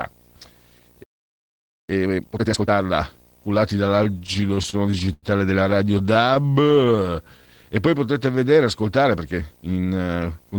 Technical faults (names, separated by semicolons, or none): video or display buzz; playback stall; time-compressed catch-up; repeated stalls (stutter); jitter buffer slow-down; jitter buffer speed-up